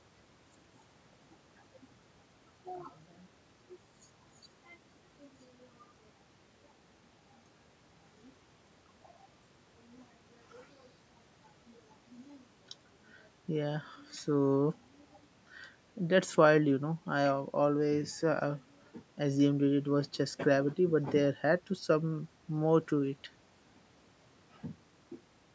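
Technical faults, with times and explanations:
No technical faults are present; the speech has passed through a call's microphone processing, which trims the lowest bass and leaves no content above 8 kHz, as expected for that path.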